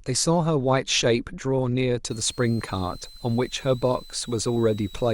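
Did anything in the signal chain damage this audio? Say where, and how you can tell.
Yes: a switching supply whistle from 2.11 s to the end, an analogue-stage fault where a power supply's burst mode leaks in as a tone wandering between 3.86 and 4.30 kHz, roughly 25 dB below the speech.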